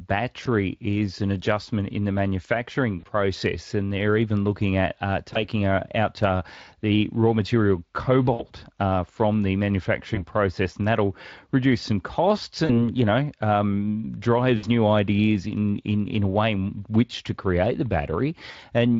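At 0.43, 2.99, 5.33, 8.33, 10.15, 12.65, 14.57 and 18.51 s, VoIP packet loss concealed by the speech codec breaks the Speex-coded speech. Each event covers 20 to 60 ms of missing audio, which fits one to three lost 20 ms frames. The decoder fills each gap by repeating its last pitch and filter at falling gain, so the sound smears into a brief buzzy tone or coloured noise that fades. On a spectrogram, the stretched sound decays smoothly, and the waveform shows a tapering stretch.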